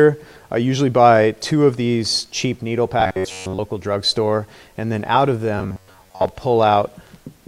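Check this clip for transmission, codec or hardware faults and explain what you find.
Two bursts of robotic sound from repeated short buffers, at 3.00–3.60 s and 5.58–6.28 s: a rigid metallic buzz near 94 Hz, likely from an audio fragment of about 10.7 ms being looped while most of the real sound was skipped.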